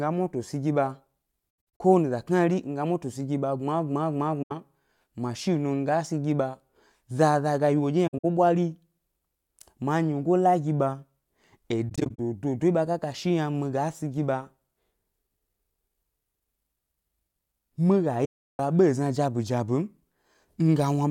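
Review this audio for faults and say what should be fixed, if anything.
AAC frame loss with muting leaves short, soft-edged silences in the speech at 1.78 s, 4.42–4.52 s, 8.07–8.25 s, 11.89–12.20 s and 18.24–18.59 s. The decoder zeroed the missing frames, and the overlapping windows fade the sound smoothly out and back in. Some holes break up into several gaps. At 8.07 s the longest run is about 70 ms, and the final gap lasts 341 ms. On a spectrogram these appear as clean vertical blank columns across all frequencies, and the waveform tapers gently to flat at each gap. Error-resilient transport with retransmission or forward error correction would prevent the lost frames.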